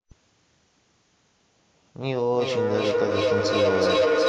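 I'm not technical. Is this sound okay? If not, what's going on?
No. From 2.31 s onward, the speech repeats about every 0.4 seconds and piles up louder: feedback echo between two devices, each picking up the other's speaker on one call.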